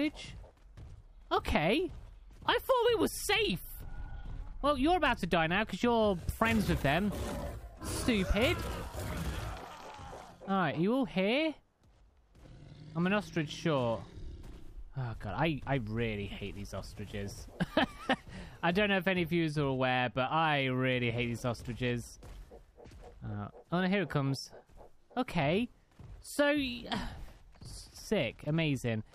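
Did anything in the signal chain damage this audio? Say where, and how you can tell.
No, nothing audible points to damage at any stage of the chain, from capture through to playback.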